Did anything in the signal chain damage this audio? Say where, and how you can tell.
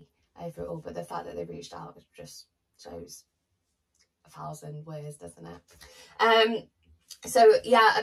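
Yes, channel delay causing comb filtering, heard throughout. One channel lags the other by around 10 ms, which points to a buffer offset at the driver stage. When the two are summed to mono, fixed notches appear from around 40 Hz upward. The sound is hollow and phasey.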